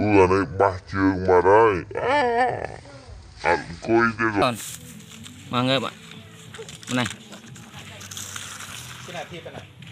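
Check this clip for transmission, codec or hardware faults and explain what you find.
One fault turns up: a section at the wrong speed, from the start of the clip to 4.42 s. The likely cause is that this stretch was played back against the wrong clock, running at 0.577 times its recorded speed, so each second of the original is spread across well over a second of output. Because speed and pitch are tied together here, the opening sounds slowed and dragged, and everything sits about ten semitones lower. At 4.42 s it snaps back to its true speed and pitch.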